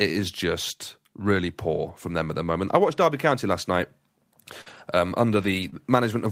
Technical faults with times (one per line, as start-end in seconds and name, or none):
1.17-1.19 lost packet rebuilt from error correction
4.61-4.68 short concealed packet loss
4.66-4.80 lost packet rebuilt from error correction
5.42-5.68 lost packet rebuilt from error correction
5.70-5.74 short concealed packet loss